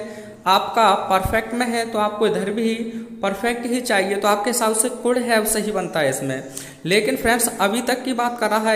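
Nothing stood out as a technical problem on listening.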